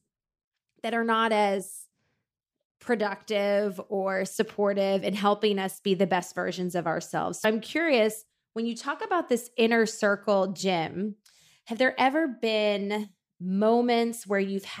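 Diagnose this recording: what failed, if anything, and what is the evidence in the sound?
A brief glitch at 7.41–7.45 s, between "best versions of ourselves" and "I'm curious when you", comes from damaged data in the compressed stream: the decoder lost sync there.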